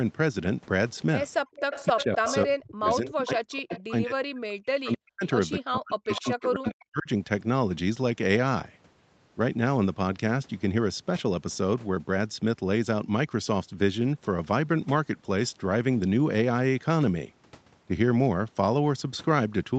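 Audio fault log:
1.54–2.36, 3.57–3.81, 6.12–6.48 s, echo leak: the far end's echo canceller likely let loudspeaker pickup through, so a copy of the speech returns 260 ms late, loud at first, fainter later.
1.89–2.29, 2.45–5.24, 5.6–7.09 s, speech suppressed in double talk: with both sides talking, the echo canceller likely mistook the talker for echo, cutting the speech by up to about 40 dB in pieces.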